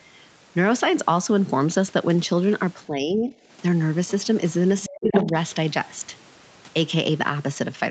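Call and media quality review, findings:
Speech suppressed in double talk, 2.87–3.33 s: talker level dips, deepest drop about 10 dB, roughly half a second affected. Likely echo canceller misreading near-end speech as echo during overlap with far end and attenuating both.

Speech suppressed in double talk, 4.88–5.34 s: much deeper cut, about 30 dB, talker largely gone for roughly 0.3 s. Same likely mechanism: suppressor clamping hard while far-end audio is active.

Other side's voice leaking through, 4.08–4.26 s: faint second voice, about 25 dB below the talker. Likely residual loudspeaker echo left in the mic signal after cancellation.

Other side's voice leaking through, 4.83–5.29 s: second voice at about the talker's level, overlapping the deep suppression above. Likely canceller losing track of the echo path, passing far-end audio while cutting the near-end talker.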